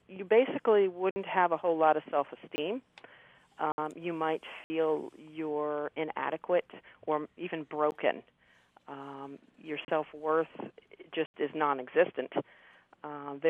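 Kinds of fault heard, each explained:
Block of digital silence: zeros replace the audio, so the sound cuts out and back with no fade, unlike a smoothed dropout. Holes of 20 to 80 ms fall at 1.11, 2.56, 3.72, 4.64, 9.85 and 11.26 s. The 13 ms gap at 7.91 s is only a tick.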